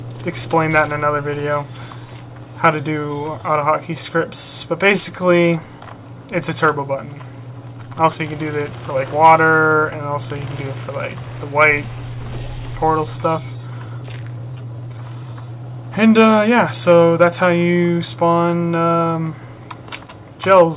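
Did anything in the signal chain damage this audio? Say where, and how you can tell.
No, nothing in the signal chain stood out as damaging this audio on listening.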